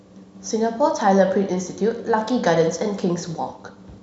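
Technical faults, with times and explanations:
No technical faults: the speech signal stays continuous and stable, with nothing in its level, timing or frequency content that points to a problem in the recording or transmission chain.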